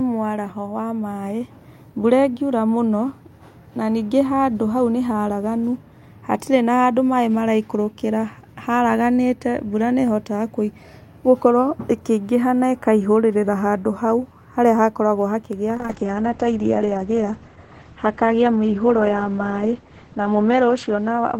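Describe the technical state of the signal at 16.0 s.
At 16.0 s a call bitrate drop is underway, from 15.77 s to the end. The starved encoder sounds rough and muffled, pointing to about 9 kbps, and the spectrogram shows everything above 8 kHz cut away.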